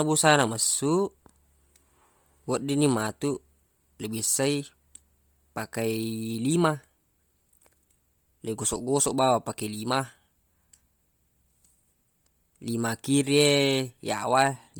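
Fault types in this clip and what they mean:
Bluetooth LC3 compression: heavy grainy, breathy fizz on the speech's upper range, likely LC3 filling discarded high bands with noise, which fits a 32 kbps stream.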